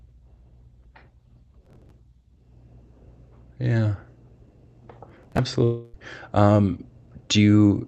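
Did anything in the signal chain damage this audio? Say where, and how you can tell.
Yes. At 1.64 to 1.91 s and 5.10 to 5.39 s there's gritty processor overload crackle: around twenty buffers of roughly 10 ms each were skipped, leaving hard-edged gaps at the driver/buffer stage.

Then from 5.64 to 5.96 s the sound is replaced by a fading synthetic buzz for about 300 ms, with no silence. That's concealment covering a long network dropout, likely packet loss.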